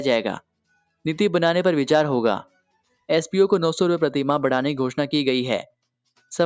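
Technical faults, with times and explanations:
Nothing stood out on listening; the audio carries the expected traits of a call's microphone processing, with the lowest bass trimmed and nothing above about 8 kHz.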